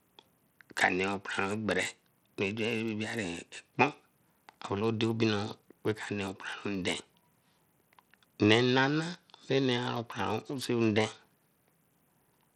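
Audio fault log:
throughout: Bluetooth SBC compression, likely cause; upper sub-bands get too few bits, fitting about 80 kbps, so speech treble flickers out amid gritty noise and aliasing.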